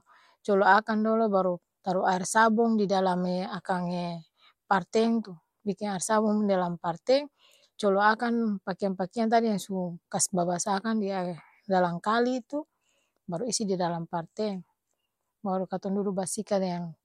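No technical faults can be heard anywhere in the recording; the speech signal stays steady and continuous throughout.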